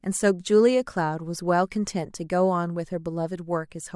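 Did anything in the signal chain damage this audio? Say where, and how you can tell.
No, nothing in the signal chain audibly damaged this recording, and the speech comes through with no fault that can be traced to any stage between capture and playback.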